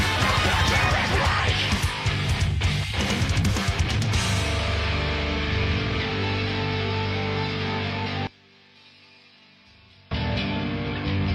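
From 8.27 to 10.11 s the sound suddenly drops away, falling by about 26 dB. What survives is faint. The likely cause is one channel inverted: with one side of the stereo pair flipped in polarity, anything the two channels share cancels when they're summed to mono. Centred material and low end collapse almost completely, leaving only the weak difference between left and right. Then at 10.11 s the full level comes straight back.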